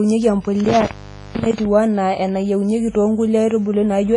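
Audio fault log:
throughout – WMA compression, likely: heavy ringing, washy smear and hiss breathing with the speech, nothing above 10.4 kHz, which fits a low bitrate near 24 kbps.
0.60–1.66 s – intermittent contact: a loose connection opens, cutting the speech out for about 0.44 s in total, with crackle at the edges and faint hiss underneath.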